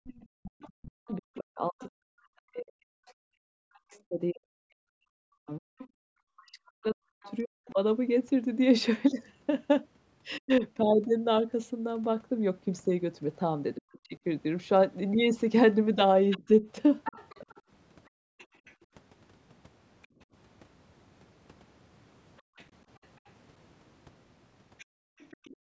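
Other side's voice leaking through, 0.04 to 7.36 s: a second voice runs about 20 dB below the talker. It is likely loudspeaker playback the echo canceller failed to remove from the microphone.

Speech suppressed in double talk, 0.41 to 10.63 s: the talker's voice dips and breaks up in pieces totalling roughly five seconds, falling by as much as about 40 dB. This is likely the canceller turning everything down while both sides spoke at once.

Speech suppressed in double talk again, 13.77 to 17.46 s: the talker's voice briefly drops by up to about 35 dB, for around half a second in all. This is likely the same double-talk clamping.

Other side's voice leaking through, 16.3 to 25.57 s: the faint second voice returns, about 25 dB under the talker. It is likely residual echo that the canceller again missed.

Background gated by the echo canceller, 18.09 to 25.64 s: the room sound drops out by up to about 40 dB, roughly a second in total. 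The canceller hard-mutes the microphone while the loudspeaker plays, and the room sound comes back when it lets go.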